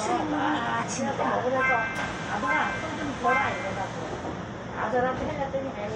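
Right at 0.82 s there's a quick blip, and another at 4.53 s, both over in a flash. That's damaged data in a compressed stream: part of the encoded file got mangled, so the decoder couldn't make sense of those frames, lost its footing, and had to hunt for the next valid frame header before it could carry on. What you hear is that tiny glitch while it recovers.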